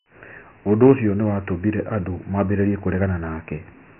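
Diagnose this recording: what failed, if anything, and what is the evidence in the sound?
The failure is at the codec stage: the speech was stored as Dialogic VOX ADPCM, the 4-bit adaptive format used for phone menus and voicemail. The heavy coding damage stays constant from start to finish. Nothing is heard above 3.7 kHz, and the rate points to 24 kbps, which fits 4-bit samples at 6,000 per second. Coarse 4-bit steps cannot follow the waveform closely, so a gritty hiss rides along with the speech wherever it sounds.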